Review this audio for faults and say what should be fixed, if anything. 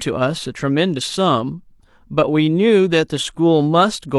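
Compressed frames skipped at 0.93–0.99 s: whole codec frames were missing or rejected as damaged, so the speech jumps ahead by about 50 ms. A spectrogram shows an abrupt vertical seam, and the waveform changes shape suddenly at the join. To prevent it, verify file integrity and use error-resilient transport or retransmission so that damaged frames are recovered before decoding.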